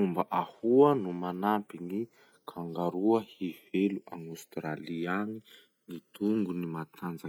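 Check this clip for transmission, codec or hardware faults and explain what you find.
There's one fault, and it runs through the whole clip: the channels are drifting apart. The two sides seem to come from devices on separate clocks, which points to a mismatch of something like 150 parts per million, so the gap between them keeps growing, reaching a bit under a millisecond by the end. Summed to mono, that sliding delay creates comb-filter notches that creep slowly across the spectrum, so the speech takes on a slow, gradually shifting flange.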